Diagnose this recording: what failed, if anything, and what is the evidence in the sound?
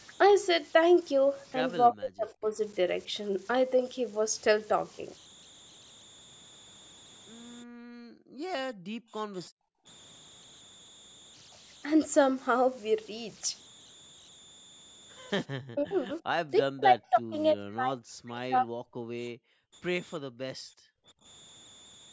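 Converter idle tones run throughout the recording: a whistle around 4 kHz sits about 27 dB below the signal and is clearest in pauses. At the converter stage, an undithered delta-sigma modulator idling on small inputs has locked into repeating bit patterns that produce this tone.

Speech suppressed in double talk appears at 1.91–2.59 s, 15.72–16.1 s, 16.45–17.36 s and 17.54–18.87 s. The speech dips or breaks up, falling by as much as roughly 40 dB. This is call processing: the likely cause is an echo canceller that could not tell local speech from loudspeaker echo and attenuated both.

Background gated by the echo canceller occurs at 7.65–8.51 s, 8.73–9.86 s, 19.32–19.74 s and 20.2–21.24 s, where the room sound drops by about 40 dB and then returns. In the call processing stage, the canceller clamped the microphone hard while the loudspeaker played and released it afterwards.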